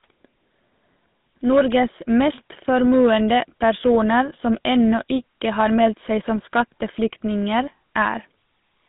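GSM full-rate coding runs through the whole recording, from start to finish. The codec rebuilds the speech from a vocal-tract model excited by regularly spaced pulses, discarding two of every three excitation samples, which fits the 13 kbps full-rate scheme. The band is held between about 150 Hz and 3.7 kHz, so the speech sounds thin and boxed in, and the damage is plainly audible as a buzzy, gravelly roughness on the voice.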